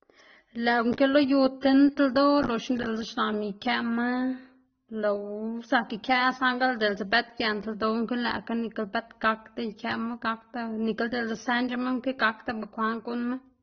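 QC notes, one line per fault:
throughout, transcoding between lossy codecs: the top of the spectrum is cut off, and two layers of coding smear sit on top of each other. This likely comes from a low-rate AAC-LC encode re-encoded to Opus, where the second codec spends bits preserving the first one's artefacts and the earlier cut-off remains.
1.21 s, 2.38 s, 13.12 s, dropped samples: each is a single sharp click, a thin vertical line in the spectrum. Probably only one sample goes missing each time, so the waveform jumps abruptly to a later value without removing any audible sound.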